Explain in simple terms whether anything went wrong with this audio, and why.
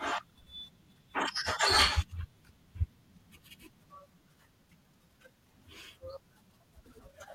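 Something did go wrong, near the end: frames out of order. Between about 6.86 and 7.00 s, two neighbouring pieces of the speech stream were delivered in swapped order and played back that way. Each piece is roughly 64 ms long, which points to small groups of three frames. You hear a brief garbled flutter. Nothing is missing; the same sound simply plays in the wrong sequence.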